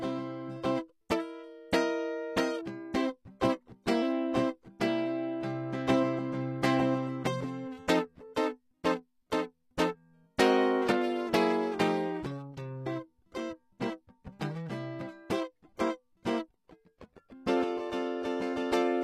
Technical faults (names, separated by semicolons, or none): HE-AAC compression